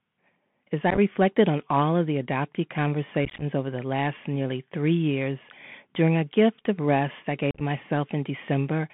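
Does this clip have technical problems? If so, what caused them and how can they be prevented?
Yes. The Bluetooth CVSD headset codec runs throughout. The speech is squeezed into a narrow telephone band of roughly 150 Hz to 3.4 kHz. The one-bit delta coding, which fits a 64 kbps link, can't keep up with loud, bright sounds, so sibilants turn scratchy over a grainy hiss. Using a wideband (mSBC or LC3) headset profile, or a wired microphone, would prevent this.

Unconcealed Bluetooth headset packet loss occurs at 0.90–0.99 s, just before "on all of the", and at 3.25–3.44 s, between "all of the adoptee" and "over the last nearly". It occurs again at 7.51–7.61 s, after "gift of rest I". Lost packets were replaced by silence or an idle pattern, punching abrupt holes into the speech. In the first two events the gaps are scattered and no longer than 15 ms, which sounds like crackle. The last has a 37.5 ms dropout. 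Keeping the headset close to the phone, away from Wi-Fi interference, and using a link with packet-loss concealment would prevent this.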